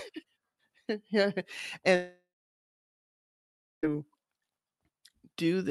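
It's a speech clip, and the trouble starts at 1.95 s: the sound smears into a fading buzz for a moment, then drops to near silence for about 1.6 s before speech returns at 3.85 s with roughly 1.9 s simply gone. That's the signature of a long network dropout. Packets stopped arriving, so the receiver stretched the last bit out and then gave up. It's likely a network stall rather than anything at the source. The call path itself shows the usual Opus band-limiting, with the top end cut off around 12 kHz.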